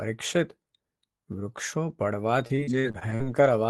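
From 2.19 s to 3.48 s the speech breaks into repeated packet loss, with a robotic sound. Seven gaps, the longest about 45 ms, cover roughly 16% of that stretch, and each is patched by stretching the preceding sound. On a spectrogram the harmonics smear into flat, repeated bands at each patch. The waveform shows short, regular-looking segments in place of natural variation. The result is choppy, robotic speech with pieces missing, running through a call path whose content tops out near 12 kHz.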